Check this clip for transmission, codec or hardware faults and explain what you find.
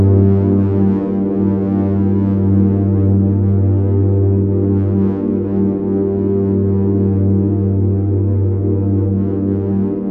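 Nothing audible points to a transmission, codec or hardware problem anywhere in the clip.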